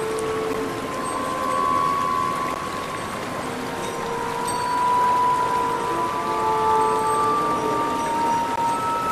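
Brief hard-edged silent holes of about 10 to 17 ms at 0.53, 2.54 and 8.56 s are gaps between stream segments, where mistimed 2 s segments leave small unfilled spaces.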